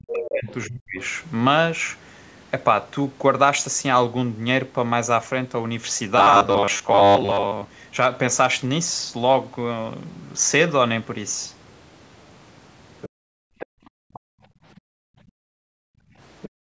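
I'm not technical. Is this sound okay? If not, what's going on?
No, this speech clip has problems from a call's echo handling.

Speech suppressed in double talk: for the first second, 0.0 to 0.99 s, the voice dips sharply and drops out in pieces. This likely happens because both sides talked at once, and the echo canceller turned the talker down along with the echo.

Other side's voice leaking through: faint snippets of a second voice slip in at 0.24 to 0.54 s, 13.01 to 13.09 s, 13.59 to 14.19 s, 14.77 to 14.81 s and 16.42 to 16.49 s. This is likely sound from the loudspeaker that the microphone picked up and the echo canceller didn't fully remove.

Robotic sound from repeated short buffers: from 6.18 to 7.69 s the voice turns into a stiff, metallic buzz at 100 Hz that only roughly follows the speech. Most of that stretch is likely tiny slices of audio repeated over and over, about 10 ms each, to fill gaps while new audio arrived too slowly.

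Background gated by the echo canceller: from 13.09 to 16.18 s, and again from 16.49 s to the end, the room sound drops away almost completely, then comes back. The echo canceller clamped the microphone down hard while the other side's audio was playing.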